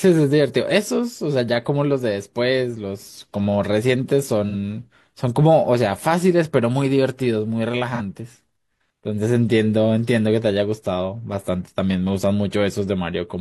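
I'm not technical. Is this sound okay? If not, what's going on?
No, not quite. There are two brief blips at 4.49 to 4.55 s and 7.95 to 8.01 s, each a smeared, noisy patch in the speech. That's AAC frame loss with concealment. A tiny chunk of about 43 ms went missing, and the player patched the gap with a guess based on the sound just before it.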